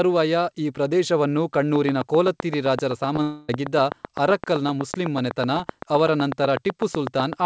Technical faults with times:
1.76-7.45 train of clicks
3.14-3.18 short concealed packet loss
3.22-3.49 long network dropout

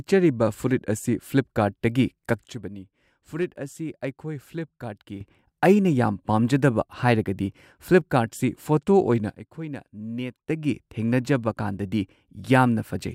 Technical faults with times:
2.47-5.21 sudden gain jump
9.30-10.50 sudden gain jump

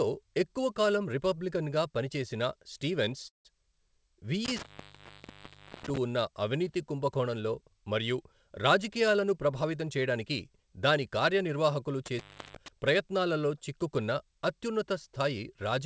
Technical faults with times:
3.28-3.47 call audio freeze
4.45-5.97 intermittent contact
9.01-11.57 jitter buffer speed-up
12.06-12.68 intermittent contact

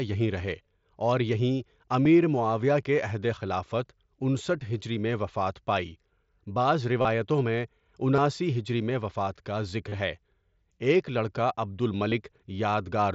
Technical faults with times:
2.04 concealed Bluetooth headset packet loss
4.60 concealed Bluetooth headset packet loss
7.02-7.05 concealed Bluetooth headset packet loss
8.16-8.18 concealed Bluetooth headset packet loss
9.89-9.92 concealed Bluetooth headset packet loss
12.10 concealed Bluetooth headset packet loss

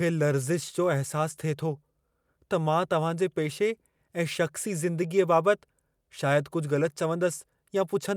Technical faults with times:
none

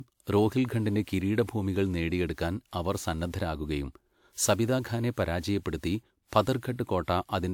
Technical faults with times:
0.00-7.53 generation loss

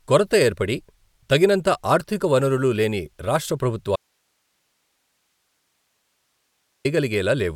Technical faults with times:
3.96-6.85 audio dropout to a faint residue

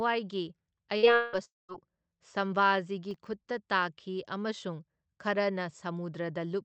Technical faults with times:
0.97-1.06 burst of packet loss
1.15-1.71 long network dropout
3.11-3.27 processor overload crackle

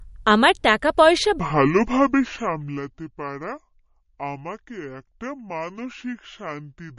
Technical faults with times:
0.00-6.99 MP3 compression
1.40-6.99 section at the wrong speed

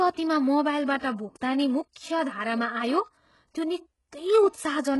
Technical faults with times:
0.00-5.00 HE-AAC compression
0.98-1.03 pre-echo

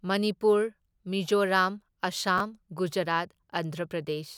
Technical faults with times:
2.38-2.40 chunks out of order

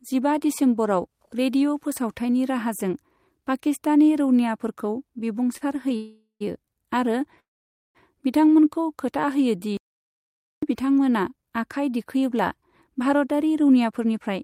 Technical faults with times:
5.57-5.63 short stall from a late packet
5.96-6.42 call audio freeze
7.40-7.97 call audio freeze
9.77-10.63 playback stall
12.62-14.43 jitter buffer speed-up

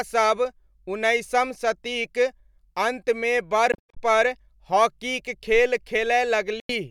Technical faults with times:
3.72-3.99 Bluetooth dropout
6.60-6.72 Bluetooth dropout

